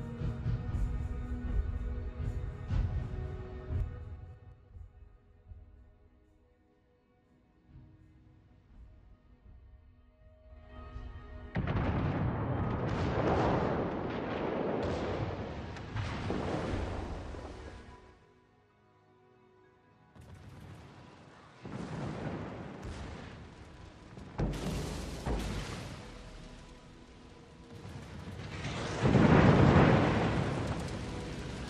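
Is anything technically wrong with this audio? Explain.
Yes. Zipper noise from 3.72 to 4.74 s: a fade of roughly 15 dB is applied in unsmoothed 3 dB steps, about five per second, each step producing an audible tick.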